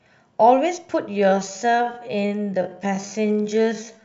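A speech clip with a time-stretched section running from 1.05 s to the end. There the pace abruptly drops to about 0.58 times normal speed, while the pitch stays unchanged, so the speech drags. The likely cause is software lengthening the audio to fit a duration by repeating short slices. On a spectrogram, harmonic spacing holds steady but syllable transitions are drawn out. The waveform shows stretched envelopes with repeated short segments.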